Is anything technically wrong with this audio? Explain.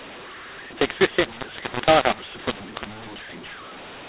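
Yes. A mu-law and A-law mix-up runs through the whole clip. The speech was coded as A-law, then decoded as mu-law. The two laws map 8-bit codes to different points on their logarithmic curves, so every sample lands at the wrong amplitude. Some levels are inflated, others shrunk, and the quietest codes jump well above silence. The speech sounds harsh and gritty, and the pauses fill with hiss. The sound also stops at about 4 kHz, which fits 8 kHz telephone coding.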